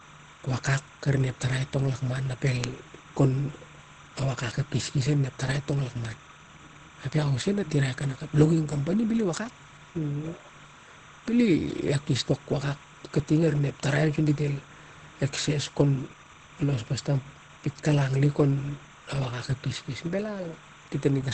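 From start to finish, a steady chirping warble sits behind the speech, roughly 25 dB below it, flipping between pitches near 1 kHz and 2 kHz. This is timecode bleed. Linear timecode, a square wave whose two pitches encode ones and zeros, has leaked from a neighbouring track or cable into the audio path. Its regular rhythm fits a 30-frame-per-second code, which is why it chatters evenly instead of wandering with the speech.

Throughout, the speech also sounds muffled and hoarse, with nothing above about 8.4 kHz. The likely cause is heavy Opus compression at a low rate, fitting roughly 12 kbps, where the encoder has switched into its SILK speech mode at wideband. At that rate the encoder models the voice and discards the upper band, so the top end is gone and the speech takes on that hoarse quality.

At 2.64 s and again at 7.13 s, a single sharp tick cuts through, broadband and unrelated to the speech around it. 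Each is a bit error spike. One bit in a single sample was flipped in memory or on a digital link. That sample's value jumped by a power of two and then returned at once, producing a click spread across the whole spectrum.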